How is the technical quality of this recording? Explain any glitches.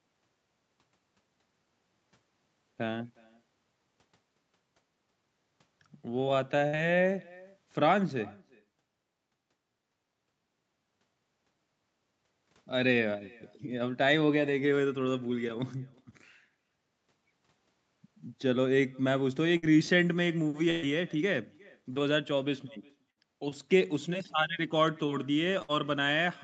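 The recording has two faults: a faint echo running through the whole speech clip, and five short dropouts from packet loss. The band stops at 8 kHz, consistent with a wideband call codec.

Echo with no canceller: the far end's loudspeaker feeds its microphone, and nothing subtracts it, so each phrase returns around 400 ms later, about 27 dB down and thin. On a spectrogram, each syllable has a faint delayed ghost trailing it.

Burst of packet loss: at 6.67, 19.57, 20.70, 23.10 and 25.62 s, about 60 ms of audio is missing (about 120 ms at 20.70 s). The receiver stretches the last sound into a fading buzz or hiss, then jumps ahead. A waveform shows a smooth decaying stretch followed by an abrupt restart.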